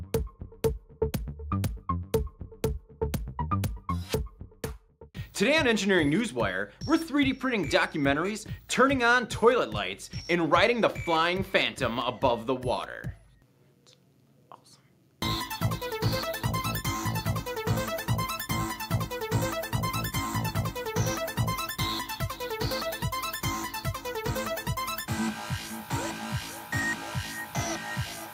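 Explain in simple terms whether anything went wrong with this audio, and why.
Nothing went wrong here: no dropouts, glitches, distortion or other transport or playback faults occur anywhere in the recording.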